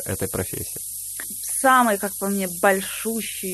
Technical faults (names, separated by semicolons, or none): low bit depth with noise shaping; skip ahead